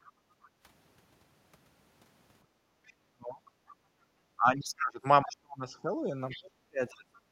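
From 0.04 to 0.49 s a faint second voice sits under the speech, roughly 30 dB down. This is likely the other side's voice leaking through: the far end played on a loudspeaker and was not fully removed from the microphone by the echo canceller. Overlapping it, from 0.12 to 0.64 s, the room sound sinks by about 9 dB for around half a second. This is background gated by the echo canceller, which pulled the microphone down while the loudspeaker was active. The same gating returns from 2.45 to 2.81 s, this time about 15 dB deep, leaving a hole in the ambience before it recovers.

From 2.87 to 3.74 s the faint second voice is back at a similar low level. Inside that stretch, from 3.09 to 3.42 s, the talker's own speech collapses steeply, by something like 35 dB, for roughly a third of a second. This is likely speech suppressed in double talk: with both ends active, the canceller could not separate its talker from the echo and attenuated everything. 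From 3.76 to 4.09 s the background gates down again, by about 14 dB.

The longest suppression runs from 4.37 to 7.06 s. Over about two seconds in total the speech dips and breaks up in pieces, dropping by as much as roughly 30 dB. Near its end, from 6.29 to 7.2 s, the leaking far-end voice becomes clearer, around 20 dB below the speech.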